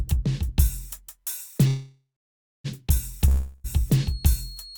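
At 1.67 s the music stops moving forward and a call audio freeze begins. The last sound carries on as a fading buzz. It dies into silence for roughly the final 0.62 s of the one-second gap. At 2.67 s the music picks up exactly where it stopped. Nothing is lost, but everything after this point now plays about 0.97 s late. The likely cause is delayed packets draining the jitter buffer, so the receiver had to stretch the last sound.

From 3.28 s to 3.67 s there is a long network dropout. Again the last sound is extended as a buzz that fades. This time it never quite reaches silence before the music returns. When it does return, it has skipped ahead. About 0.36 s of the music is simply gone, replaced by that fill. Audio likely stopped arriving for that stretch, and the receiver never played the missing part.

At 3.87 s a feedback whistle enters and lasts to the end. It is a thin, steady tone at 4.3 kHz. 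It sits well under the music, around 20 dB down, and swells and fades slowly in level. It does not grow or run away. The likely cause is a loudspeaker-to-microphone loop held just at the edge of feedback, so one frequency keeps ringing.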